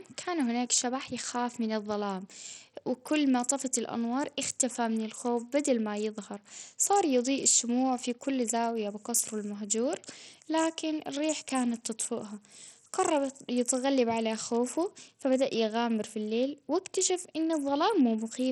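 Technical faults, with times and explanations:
Throughout: Bluetooth SBC compression, likely the cause of heavy damage here. The speech has nothing above 14.5 kHz, and a gritty grain sits on it. The top sub-bands get too few bits, and the rest are coarsely quantised, which fits a bitrate near 64 kbps.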